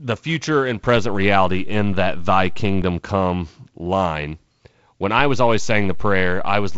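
Speech, carried through G.722 wideband coding at 48 kbit/s with nothing above about 7.7 kHz, has two DC steps. After "future and", at 0.96 s, the waveform's zero line jumps and holds until 2.82 s, just before "come line when". A second step follows that phrase at 5.19 s and lasts to the end. Each jump is a low thump or click, while the speech continues unaltered, unlike a dropout or glitch click, which would disturb the sound itself.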